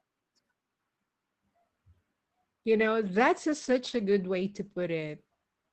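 A call bitrate drop hits this speech recording at 2.71 s and lasts to the end of the clip. The encoder was handed a much smaller bit budget, with the sound pointing to a fall from around 32 kbps to about 13 kbps. The coding turns coarser and the audio band shrinks from 20 kHz to 8 kHz, so the speech goes muffled and rough, staying at its worst for 2.25 s without recovering.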